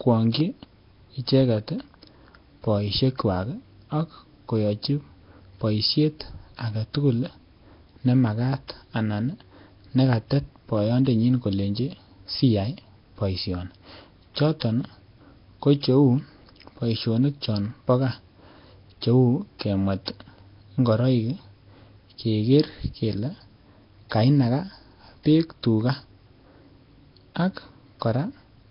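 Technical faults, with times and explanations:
Throughout, Nellymoser compression, likely: the speech has a rough, hissy halo and a smeared, underwater feel, and nothing comes through above about 5.3 kHz. The damage is heavy, and the rate sounds like it sits around 22 kbps. A block coder with a fixed, thin bit budget gives the weak bands nothing and fills them back in with noise, which is where the grainy fizz hanging around every syllable comes from.
19.59 s, pre-echo: a sharp attack here gets a brief hiss running ahead of it, about 18 ms of it, and the onset itself comes across soft and smeared rather than crisp. The transform coder spreads its quantisation noise evenly over the whole block. Because the attack lands late in that block, noise scaled to the loud part also fills the quiet stretch just before it.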